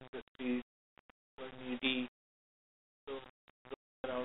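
From 3.75 to 4.04 s, packet loss on an ADPCM call drops about 0.3 s of this 32 kbit/s G.726 speech, around fifteen packets. A hard-edged silence follows. The mismatched decoder then resumes with brief distortion.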